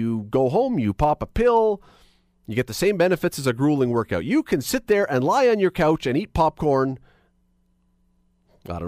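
Speech recording with no audible technical faults anywhere in the clip.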